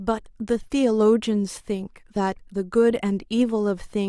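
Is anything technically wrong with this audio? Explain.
No, nothing technically wrong can be heard in this speech recording. There is no problem to point to anywhere in it.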